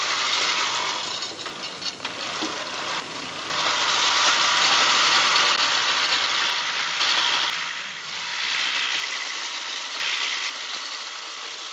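Chunks out of order occur at 1.5 to 3.5 s, 6.5 to 7.5 s and 9.0 to 10.5 s. In each span a 500 ms block of audio arrived late and plays after material that should follow it, displaced by three, one and two blocks respectively. Nothing is missing, but each reshuffle leaves three hard joins, heard as a brief jumbled stretch where the sound jumps forward and then back.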